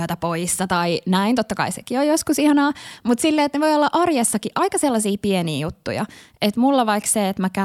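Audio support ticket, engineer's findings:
Word clock ticks across the speech, from 0.25 s to 7.08 s: sharp clicks about once a second, roughly seven, uneven in strength. Probable culprit is the digital input receiver free-running instead of locked to the source. A clock offset of around 20 ppm slips one sample on each wrap. Fix the sync source.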